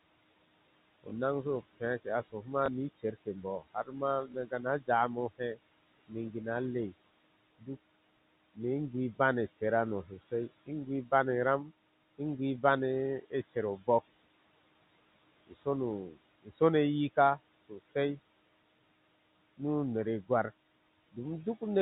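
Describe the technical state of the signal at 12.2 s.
Parts of the speech around 12.2 s sound swallowed and faint, with soft consonants or word endings dipping by up to about 10 dB for brief moments adding up to roughly a tenth of a second, within the stretch from 11.65 to 12.63 s. This is speech cut by the noise suppressor: it judged those quieter speech fragments to be steady background noise and turned them down along with the noise, so they lose level and presence instead of passing through intact.

Underneath, the background sinks between the words and rises under them. These are noise suppressor artifacts, present through the whole clip. The suppressor lowers, frame by frame, each frequency band it classifies as noise, pulling the room noise down by about 20 dB. Because that decision changes from frame to frame, the noise level follows the speech rather than staying steady.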